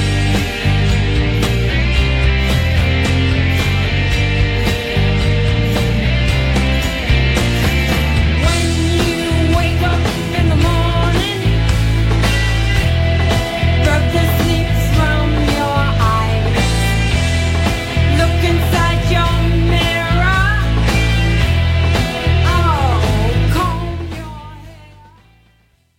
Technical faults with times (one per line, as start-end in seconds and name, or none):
23.47-25.98 truncation distortion on a fade